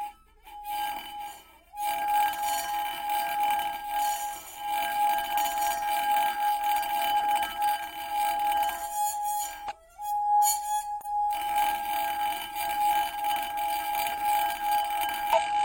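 It's a recording of sounds, and it's got four short bursts of damaged data in the compressed stream: at 7.16, 9.66, 11.01 and 15.33 s, each lasting about 55 to 65 ms. You hear them as quick glitches in the sound. Some of the encoded bytes there are wrong, so the decoder misreads those frames, loses its sync and has to hunt for the next valid frame header before playback is clean again.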